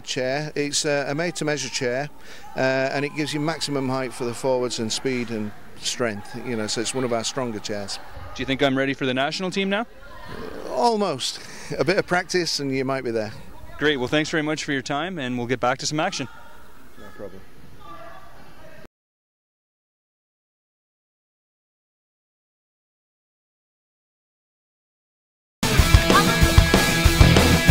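No technical faults are audible anywhere in the recording.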